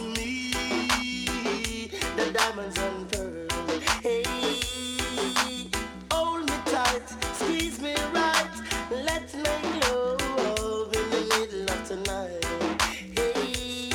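At 9.15 s there is a single sharp click, visible as a thin vertical line running across the whole spectrum. This is most likely dropped samples: a handful of samples, well under a millisecond's worth, went missing, so the waveform jumps straight from one value to a later one. Unlike a dropout, no sound is audibly removed and there is no gap of silence, only the instantaneous step and its broadband tick.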